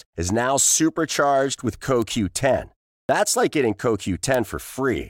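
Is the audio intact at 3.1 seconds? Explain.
No. A clipped start after a pause affects 3.05 to 3.09 s. After about 0.37 s of quiet, the output path needed time to wake, and about 40 ms of the returning speech was swallowed, so it begins abruptly. Muted pauses would silence only the gap, not the speech.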